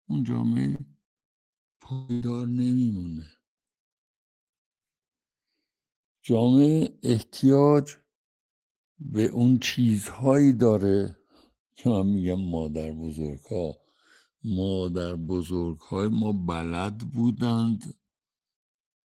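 Throughout the speech, the channels are drifting apart: separate clocks about 100 ppm apart slide the inter-channel delay to roughly a millisecond, so mono sums show sweeping comb notches and slow flanging.

From 0.75 to 2.24 s, repeated packet loss leaves seven gaps, the longest 160 ms, patched by extending prior sound. It sounds choppy, with smeared, stretched spectrogram frames.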